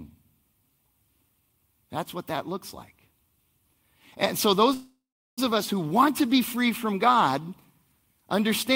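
Call audio freeze at 4.73 to 5.39 s: the speech stops and its last sound lingers as a fading buzz or hiss, then about 380 ms of silence. Packets were likely held up and the jitter buffer ran dry. Speech then resumes where it paused, nothing lost, now running 641 ms late.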